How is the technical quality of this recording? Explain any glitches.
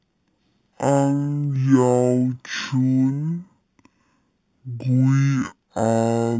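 The recording has a serious format fault present from start to finish: stereo read as mono. The interleaved left and right samples are being consumed as one channel, so the speech runs at 0.5x speed and 12 semitones (one octave) low, sounding slow and deep, with a fainter mirrored copy in the upper spectrum.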